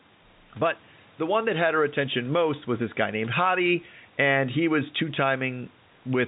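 Nothing technically wrong stood out on listening to this speech recording.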